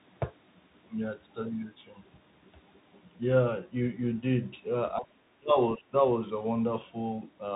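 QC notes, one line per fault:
Throughout, Bluetooth CVSD headset codec: a one-bit adaptive-step coder, fitting a 64 kbps link, caps the band near 4 kHz, adds granular hiss and scratchy, distorted sibilants.
4.98–5.56 s and 5.76–5.95 s, speech suppressed in double talk: likely an echo canceller confusing talker with echo, cutting speech by up to about 30 dB, then about 20 dB.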